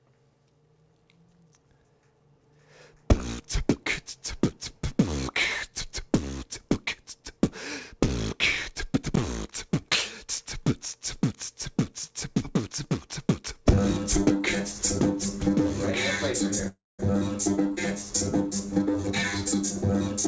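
Audio that came through a call path, with content topping out at about 8 kHz, which fits a wideband G.722 link. At 16.68 s there's a call audio freeze lasting about 0.33 s: the last sound smears on and dies into silence before picking up where it left off, likely from packets stalling until the jitter buffer ran dry. Then from 18.72 s to the end there's a jitter buffer speed-up: pitch holds but everything runs about 14% fast and feels rushed, as the receiver trims roughly a fifth of a second of pitch-period slices to catch up on the delay the freeze built up.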